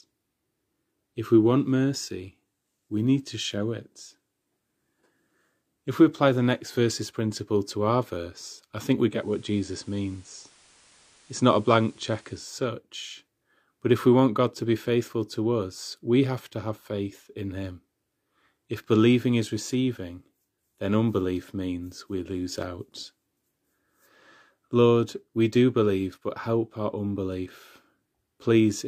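A hybrid radio receiver dropped its digital signal during this speech clip and blended across to the station's FM broadcast from 9.08 s, just after "verse I think we", returning to digital at 12.62 s. This is a digital radio blending to analogue. The 300 ms cross-fade to FM brings up FM hiss roughly 30 dB below the speech and shifts the level by about 1 dB.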